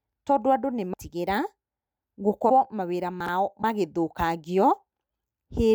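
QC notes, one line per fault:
0.93 s, 2.49–2.51 s, 3.61–3.64 s: broken MP3 bit reservoir. Each spot is a brief chirp or noise burst where the speech jumps ahead. Frames were likely lost, so following frames read borrowed data from the wrong bytes. The timing fits 24 ms frames.
3.20–3.28 s: chunks out of order. A 20 ms chunk plays three chunks late, after audio that should follow it. Nothing is missing, but the speech sounds briefly jumbled. There are three hard joins where the sequence breaks.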